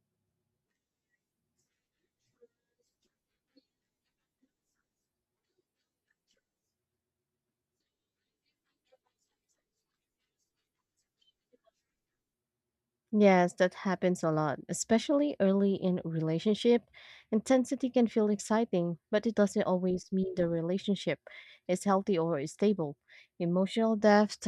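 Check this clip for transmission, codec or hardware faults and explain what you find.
Nothing stood out on listening to this speech recording; no faults were heard.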